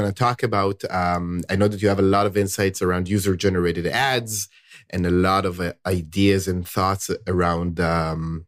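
Nothing here needs flagging: the speech runs along without a single glitch, gap or odd artefact anywhere in it.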